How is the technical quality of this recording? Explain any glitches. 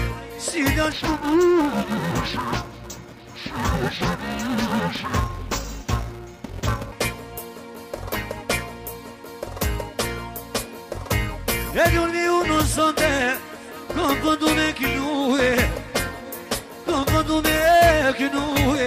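The recording has one clear glitch, interleaved audio read as planar, from 0.92 to 6.92 s. Each short block of stereo samples, about 2.9 ms long (which points to 128-sample blocks), has its alternating left and right values split into first and second halves. The sound turns dull and robotic, with a buzz at about 345 Hz and no obvious drop in pitch.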